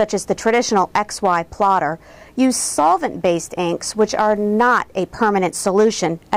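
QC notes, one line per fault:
Throughout, hard clipping: the level going into some stage sits about 5 dB hotter than it can pass, so the loudest peaks get sliced flat. Only a small share of the samples, somewhere around one or two percent, actually hit the ceiling, so you hear it as a gritty crackle riding the peaks rather than constant fuzz. Those squared-off tops throw extra harmonics way up the spectrum, which is where the edginess comes from.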